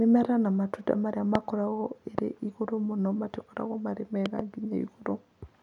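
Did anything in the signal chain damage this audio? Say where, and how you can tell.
Yes, three loud pops at 1.35, 2.18 and 4.26 to 4.41 s, the last a double, peaking about 15 to 20 dB over the speech. The speech continues underneath, unlike a dropout's gap, so this is likely an analogue voltage step from wiring or a switch.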